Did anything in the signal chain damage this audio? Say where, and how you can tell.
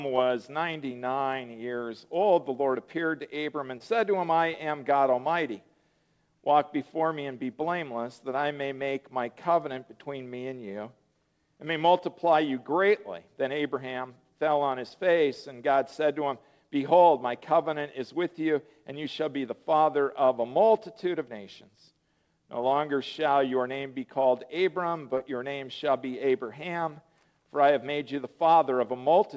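Yes, at the network stage: short concealed packet loss at 3.78–3.82 s, 4.52–4.56 s and 25.18–25.21 s. About 20 ms of audio never arrived each time, and the receiver extrapolated the preceding sound before crossfading back. Each gap appears as a brief smear or wobble, a smoothed patch on the waveform and a blurred vertical strip on the spectrogram, all beneath the call codec's cutoff at 8 kHz.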